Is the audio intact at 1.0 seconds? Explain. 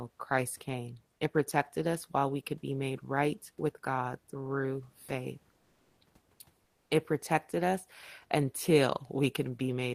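No, periodic clock jitter is present at 1.0 s and through the whole clip. Interference at around 100 Hz wobbles the converter's sampling clock, adding sidebands that distance above and below every speech component, strongest in the highs, giving a rough, metallic edge while speech sounds.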